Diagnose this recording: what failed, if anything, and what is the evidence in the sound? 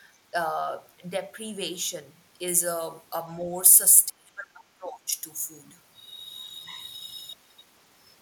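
The call-processing stage failed: the echo canceller most likely could not tell the local talker from loudspeaker echo during double talk, so it turned both down together. That produced speech suppressed in double talk, with a brief, shallow dip of only a few dB from 3.33 to 3.48 s. A much deeper cut, around 30 dB, follows from 4.08 to 5.12 s. For about a second the speech nearly disappears.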